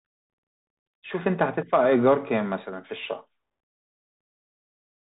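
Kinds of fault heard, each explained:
Bluetooth CVSD headset codec: The speech sits in a narrow band with nothing above about 3.8 kHz. The coarse, grainy edge is plainly audible, from a one-bit up-or-down coder whose adaptive step can't keep up with fast changes, which fits a 64 kbps CVSD link.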